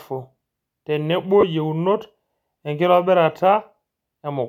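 Lost LE Audio frames at 1.41 to 1.43 s: for about 20 ms the speech is briefly replaced by a rough, hissy smear, which fits two consecutive 10 ms frames going missing on the Bluetooth LE Audio link. With no new data, the LC3 decoder filled the gap by repeating the last spectrum it had received with randomised signs. That keeps the overall level but destroys the fine structure, so the sound turns noisy before normal decoding resumes.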